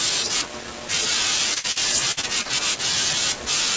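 A speech recording turns choppy and robotic from 1.54 to 2.47 s, with short pieces dropping out. This is repeated packet loss: six gaps, the longest 55 ms, were papered over by stretching the preceding sound, covering about 23% of that stretch. The call codec's band limit removes everything above 8 kHz.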